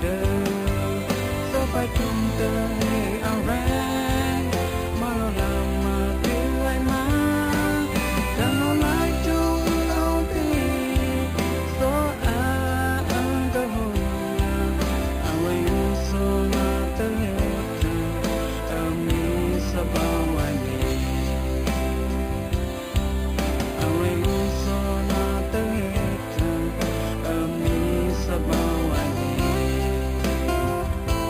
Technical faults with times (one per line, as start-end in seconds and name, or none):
0.00-31.30 imaging from sample-and-hold upsampling